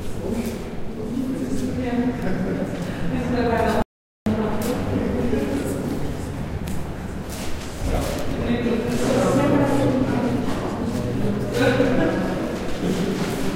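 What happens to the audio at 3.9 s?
An audio dropout to silence runs from 3.82 to 4.26 s: the input was likely lost briefly, so about 0.44 s of sound vanishes into dead silence with no room tone.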